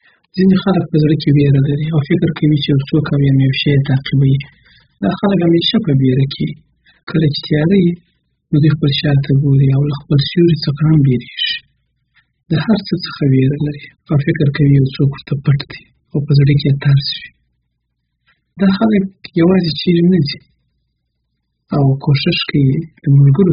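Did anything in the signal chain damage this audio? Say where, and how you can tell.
Yes, at the codec stage, throughout the speech. Nothing is present above 5.1 kHz, and sibilants and sustained sounds are smeared, warbling and fizzy, which fits heavy AAC compression, likely AAC-LC at a very low bitrate near 8 kbps. A plain low-pass filter would dull the sound without that texture.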